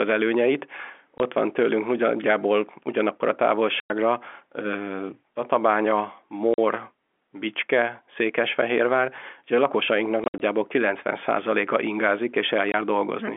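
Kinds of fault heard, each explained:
Packet loss filled with silence: at 1.18–1.2 s, 3.8–3.9 s, 6.54–6.58 s, 10.24–10.4 s and 12.72–12.74 s the speech drops into dead silence because parts of the stream never arrived and nothing covered them. The gaps last 20, 40 and 100 ms, all multiples of 20 ms, which fits 20 ms packets. Just after "ugye a lakosainknak" the loss is scattered in holes up to 60 ms, and every gap has hard edges.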